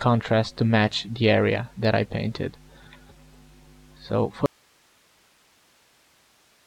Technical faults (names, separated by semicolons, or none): audio dropout to a faint residue